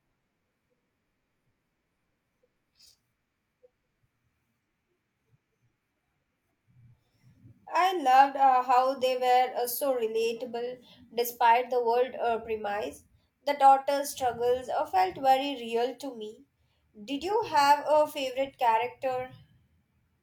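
Listening to this recording of speech, nothing stood out as a technical problem at any point.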